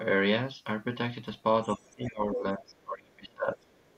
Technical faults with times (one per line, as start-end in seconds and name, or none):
1.74-1.95 other side's voice leaking through
1.75-3.66 speech suppressed in double talk
3.69-3.96 other side's voice leaking through